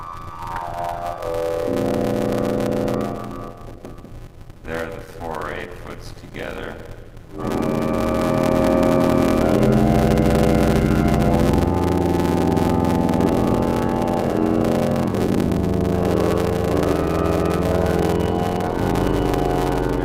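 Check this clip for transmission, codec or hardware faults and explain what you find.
Two faults are present. A block size mismatch (padded) runs throughout the clip: each 512-sample read block is only partly filled, with zeros padding the rest. This causes an 86.1 Hz buzz, and the audio plays at 0.625 times normal speed with the pitch roughly unchanged.

A jitter buffer speed-up runs from 3.52 to 5.08 s. The receiver trimmed short pitch-period slices, around a tenth of a second in total, so the sound runs 107% fast and feels hurried at the same pitch.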